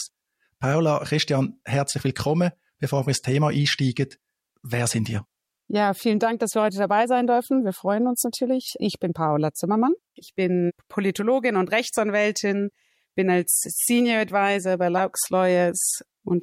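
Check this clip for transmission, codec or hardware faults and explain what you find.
One codec fault is audible, near the end of the clip.

Corrupt frame decoded at 14.98 s: a few compressed frames arrived with flipped bits, and the decoder played them anyway, so misread codes and gains put energy at wrong frequencies. It sounds like a brief chirpy burst of noise peaking around -20 dBFS.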